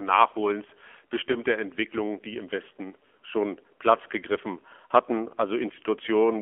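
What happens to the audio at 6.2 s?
At 6.2 s you're still hearing the AMR narrowband mobile codec, which runs through the whole clip. The speech is squeezed into a phone band of roughly 250 Hz to 3.4 kHz, so it's thin and boxy with no top end. The codec rebuilds the voice from a vocal-tract model driven by a few pulses per short frame, and at this end of the scale it sounds plainly buzzy and synthetic, which fits a low bitrate of around 7.4 kbps.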